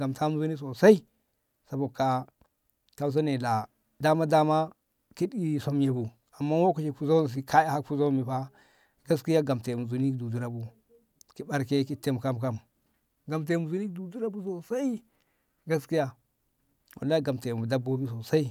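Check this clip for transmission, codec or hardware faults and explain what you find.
No transmission, codec or hardware faults can be heard anywhere in the speech; the signal holds steady throughout.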